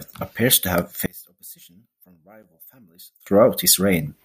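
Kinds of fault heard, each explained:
One channel inverted: from 1.06 s to 3.27 s, right after "appears to have", the speech drops by about 28 dB to a faint copy. The likely cause is one stereo channel with reversed polarity, so the shared, centred speech cancels when summed to mono, leaving only the faint difference between channels. On a waveform the amplitude collapses to a sliver there; a spectrogram shows the band fading.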